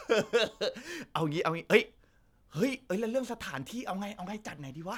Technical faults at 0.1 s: none

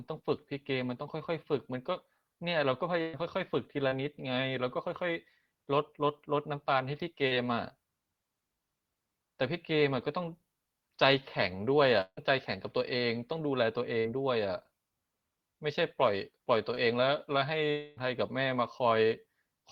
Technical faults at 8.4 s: none

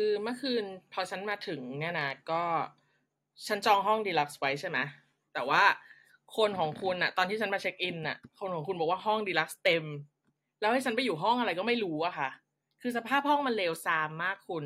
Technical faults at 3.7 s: none

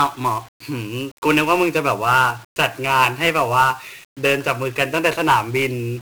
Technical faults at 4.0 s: 1-bit DFPWM compression

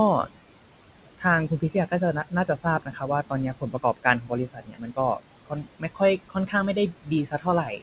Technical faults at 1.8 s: noise suppressor artifacts; speech cut by the noise suppressor

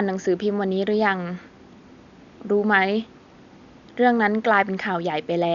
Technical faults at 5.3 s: none

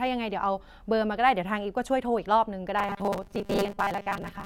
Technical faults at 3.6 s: robotic sound from repeated short buffers

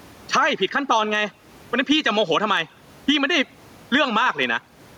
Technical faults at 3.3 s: gain pumping

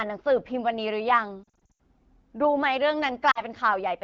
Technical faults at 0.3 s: none

